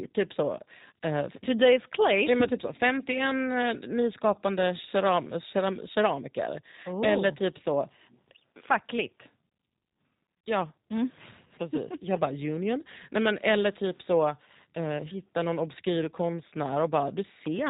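Throughout, the G.729 codec at 8 kbit/s rebuilds the speech from a filter, a pitch predictor and sparse pulses. It sounds rough and synthetic, and a spectrogram shows nothing above 4 kHz. From 10.38 to 10.44 s, VoIP packet loss concealed by the speech codec fills a 60 ms gap, which fits two lost packets, with extrapolated sound whose waveform envelope fades before the speech returns weakened.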